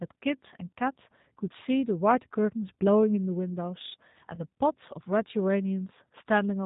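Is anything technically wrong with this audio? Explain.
Yes. The speech runs through the G.729 codec for the whole clip, and there is a short VoIP packet loss concealed by the speech codec near the end.

Throughout, the speech passes through a low-rate coder that rebuilds it from a vocal tract filter, a pitch predictor and a few pulses per frame, which fits 8 kbit/s G.729A. Nothing above 4 kHz survives, and the speech sounds plainly rough and synthetic.

From 4.35 to 4.40 s, about 20 ms of audio went missing in transit. The decoder covered the gap by extending its last pitch and filter settings at falling gain. The result is a brief stretched, fading patch where the speech should be, and the voice stays weak or distorted for tens of milliseconds or more after the signal returns.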